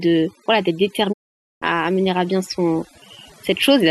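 Overdone noise removal runs through the whole speech clip. A noise reduction stage was pushed too hard. It pulls individual frequency bands far down whenever they sit close to its noise estimate. Quiet parts of the voice fall below that line and vanish with the hiss. Between phrases the background drops to near silence, dotted with small twinkling specks.

At 1.12 s a digital broadcast dropout begins. The receiver stopped getting usable data and muted. The sound fades out over about 20 ms, then stays silent. It returns at 1.64 s. That leaves roughly half a second of programme missing, which fits a run of 15 lost frames. Nothing sent during the gap can be recovered.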